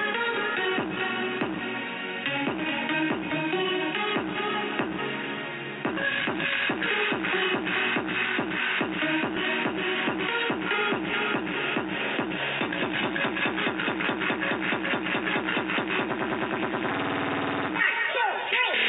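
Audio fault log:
9.35 s, lost LE Audio frames: a 15 ms dropout, which fits two missing frames, was filled by replaying the last spectrum with random signs, leaving a brief noisy smear.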